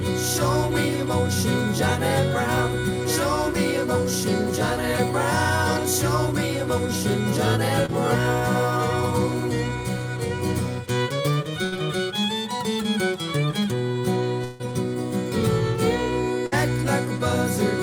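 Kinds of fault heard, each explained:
Short concealed packet loss: A tiny slice of audio arrived too late and the receiver patched over it by extending what came just before. Around 7.86 s it's a quick smear lasting about 25 ms, with roughly 20 ms of real sound gone.
Burst of packet loss: A run of lost packets, bridged by stretching the last sound and letting it fade. At 11.64 to 11.74 s it's about 75 ms of held, decaying fill hiding 80 ms of missing audio, and at 16.46 to 16.54 s about 54 ms covering 60 ms.
Long network dropout: From 14.44 to 14.73 s the sound freezes into a fading continuation for about 151 ms and never drops to silence. It then picks up further along with roughly 160 ms skipped, likely because nothing arrived from the network for that stretch.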